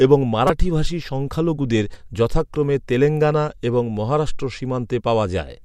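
A short chirp or burst of noise cuts into this speech clip from about 0.47 to 0.50 s. It is a corrupt frame decoded: a single compressed frame arrived with damaged bits, and the decoder played it anyway, sending energy to the wrong frequencies for its 30 ms.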